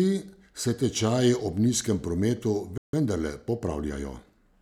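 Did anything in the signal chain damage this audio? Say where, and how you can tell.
Yes. At the playback stage there is a playback stall: the speech cuts to silence from 2.78 s to 2.93 s, a gap of about 155 ms, then resumes. The likely cause is the player's buffer running dry or its output thread being blocked briefly.

Right after it, from 2.93 s to 4.45 s, comes time-compressed catch-up: the speech runs about 1.1 times fast with unchanged pitch, as the player trims and cross-fades short slices to work off the backlog left by the gap.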